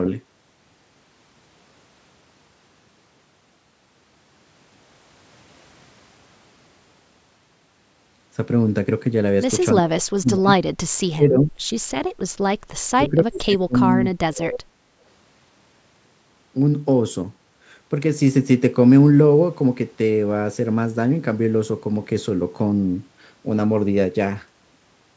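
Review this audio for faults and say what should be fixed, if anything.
Speech suppressed in double talk occurs at 9.76–10.5 s, 11.14–11.58 s and 12.96–14.81 s. The speech drops away in pieces, by about 40 dB in the first stretch and about 30 dB in the other two, for roughly half a second, under half a second and one and a half seconds. The likely cause is an echo canceller that could not separate this talker from loudspeaker echo during overlapping speech and attenuated both. Prevent it by tuning the canceller's double-talk detection and limiting suppression depth.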